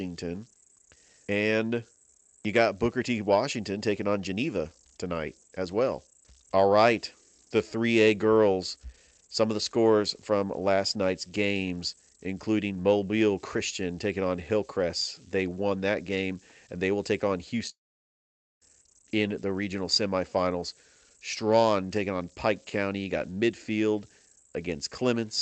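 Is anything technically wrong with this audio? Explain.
Yes, there are two faults in this speech clip.

Converter idle tones run throughout. A delta-sigma converter working without dither settles into repeating bit patterns on low-level input, producing a whistle around 10 kHz, about 28 dB below the speech, audible in pauses and as graininess under quiet passages.

A long network dropout runs from 17.69 to 18.63 s. Audio, likely lost in transit, stopped arriving for about 0.92 s; the receiver stretched the last sound into a fading buzz, leaving near-silence before speech resumes with that stretch missing.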